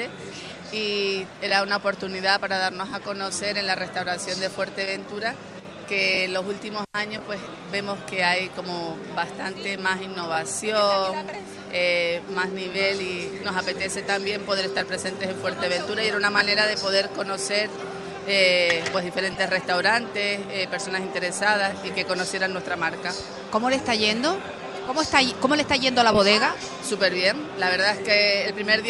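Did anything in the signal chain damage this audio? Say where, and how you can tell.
Yes. From 5.60 to 5.65 s one channel drops out: the level falls abruptly by about 6 dB and recovers, the signature of one side of a stereo pair vanishing before the mono sum. The cause is likely a momentary break in analogue wiring or a connector.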